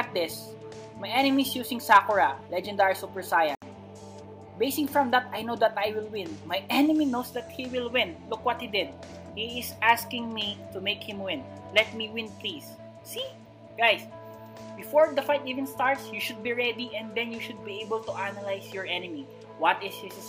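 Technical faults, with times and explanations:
3.55–3.62 s, Bluetooth dropout: a run of audio packets most likely failed to reach the headphones before their playback deadline and was discarded, so the output fell silent for about 70 ms. A gap that long fits roughly three lost packets. When packets arrive again, the sound picks up further along, as though it had kept playing through the gap, so that short stretch is simply missing.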